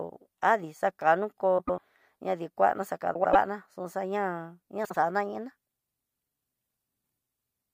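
Frames out of order hit this speech at 1.58–1.79 s, 3.14–3.36 s and 4.85–4.96 s: adjacent blocks played swapped, roughly 96 ms, 96 ms and 48 ms each, giving a garbled flutter. Unlike a dropout or repeat, no time is lost.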